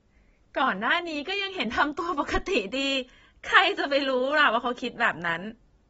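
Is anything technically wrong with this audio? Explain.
Yes. Throughout the speech, nothing is heard above 7.7 kHz. The sound is dull and smeared, with a fizzy, warbling edge on sibilants. This is likely AAC compression. The encoder drops the top band and coarsely quantises the rest, which fits a low bitrate near 24 kbps.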